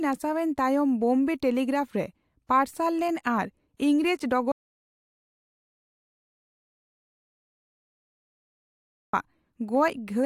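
At 4.52 s the speech cuts out into an audio dropout to silence. It stays dead until 9.13 s, about 4.6 s. No room tone remains. The input was likely lost while silence kept being written. Whatever was said then is gone.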